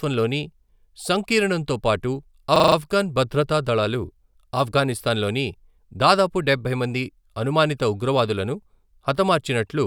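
Speech, and there's a system hang loop at 2.56 to 2.76 s, right after "సంకీర్ణంతో పాటు" and before "ఆఫ్ఘన్ భద్రతా దళాలు ఆఫ్ఘనిస్తాన్లోని". For about 0.2 s the same 40 ms slice repeats exactly, five times over, so you hear a buzzy stutter at 25 Hz instead of moving audio. The system stalled while the sound hardware kept replaying its ring buffer, which fits a buffer about 40 ms long. Once it recovers, essentially nothing is missing.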